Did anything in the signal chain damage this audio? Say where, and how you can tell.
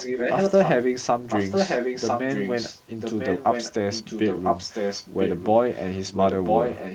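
Yes, in call processing: the far end's echo canceller likely failed to remove its loudspeaker's output from its microphone, so an echo leak returns the speech about 1.0 s late. The delayed copy runs from 0.0 to 0.71 s, 1.28 to 2.83 s and 5.72 s to the end at roughly the same loudness as the direct speech, and from 3.0 to 3.74 s and 3.91 to 5.47 s a few decibels quieter.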